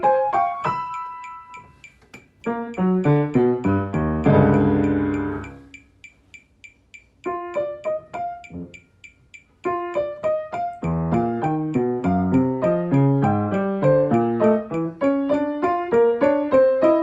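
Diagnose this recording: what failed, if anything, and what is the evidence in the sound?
Nothing failed: the sound carries no audible fault, and the Opus call path it passed through, with its top end reaching up to about 12 kHz, is doing what it should.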